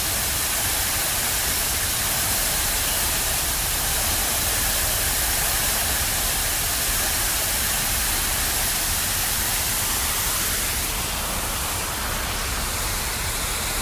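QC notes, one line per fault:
No audible faults were found in this clip of everyday sounds.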